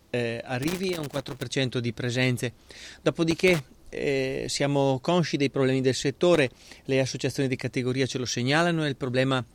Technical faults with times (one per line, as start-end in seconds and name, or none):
0.63-1.45 loose connector crackle
3.31-3.62 loose connector crackle
6.34-6.75 loose connector crackle